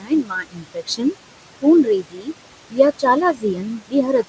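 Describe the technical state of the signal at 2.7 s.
At 2.7 to 2.79 s, speech is cut by the noise suppressor: it treats a stretch of speech as noise and pulls it down by about 17 dB, leaving roughly a tenth of a second faint and swallowed. Noise suppressor artifacts are also present here: the background is held about 21 dB lower as the gain shifts frame by frame.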